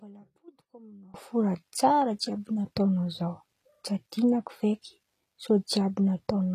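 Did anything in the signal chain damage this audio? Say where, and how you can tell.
Yes. One channel inverted, from 0 to 1.14 s, is most likely a wiring fault: a swapped balanced pair or a miswired lead flipping one side's polarity. Summed to mono, the centred speech cancels against itself and drops about 24 dB, leaving only a faint residue of the channel difference. The level snaps back just before "fo tsara jiàby nataon̈ao", where both channels return to matching polarity and the speech reinforces instead of cancelling.

HE-AAC compression, present throughout, is the likely cause of the gritty, metallic treble and lispy s sounds heard across the whole clip. This is a codec-stage fault. The encoder codes only the lower spectrum and synthesises the top by copying lower bands upward under a coarse envelope, so the harmonics above the crossover don't align with the ones below. The damage is plainly audible, nothing reaches past 15 kHz, and the band replication fits a bitrate around 24 kbps.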